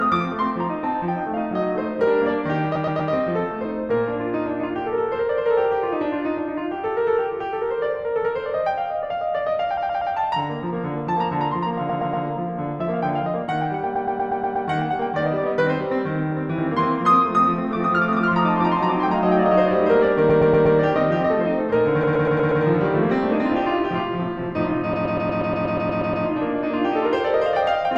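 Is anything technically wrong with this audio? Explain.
Yes, there are two faults in this music.

Repeated frames occur at 2.75–3.11 s, 9.77–10.13 s, 11.89–12.25 s, 13.95–14.67 s, 20.29–20.77 s, 22.03–22.63 s and 24.93–26.25 s. A 120 ms stretch of compressed frames was delivered more than once, so the decoder replays it three to eleven extra times, eleven in the last run. It sounds like a rhythmic stutter, and each run lengthens the music by 360 ms to 1.32 s.

A doubled audio track starts abruptly at 16.58 s and continues to the end. A second full-band copy of the music trails the original by about a third of a second at roughly the same loudness. The likely cause is the same signal being captured again through a slower path and mixed back in. The copy has no reverberant tail or room colour, so it sounds like a dry, distinct slapback of everything.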